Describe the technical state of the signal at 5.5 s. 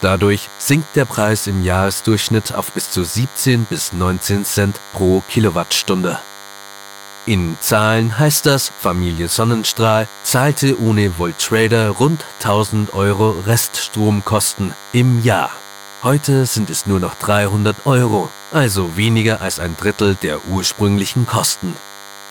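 At 5.5 s there's DECT cordless phone buzz, present through the whole clip: a 100 Hz radio burst rectified into a thin, harmonic-rich buzz around 20 dB down.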